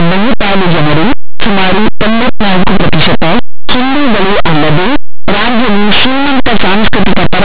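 From start to finish, the speech is buried in harsh, very loud distortion: linear audio read as companded. Plain linear 8-bit samples are being expanded as mu-law codes, so values just to one side of zero map to maximal outputs while their neighbours stay small, shredding the waveform.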